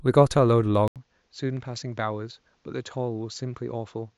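At 0.88 s the system likely switched its input to a poorer device, such as another microphone or a headset's call profile, and stayed there to the end of the clip. The switch leaves a gap of about 80 ms of silence. After it, the speech loses everything above 7.6 kHz and sounds duller and boxier, drops roughly 10 dB in level, and sits over a new background noise around 40 dB below the speech.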